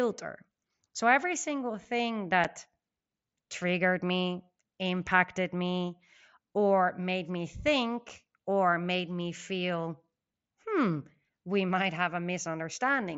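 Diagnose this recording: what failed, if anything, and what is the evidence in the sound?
Unconcealed Bluetooth headset packet loss, on the headset radio link. Two abrupt 7.5 ms holes, at 2.44 s and 8.09 s. Each fits one lost packet left unfilled.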